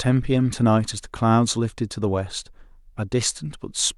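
No faults are audible anywhere in the speech.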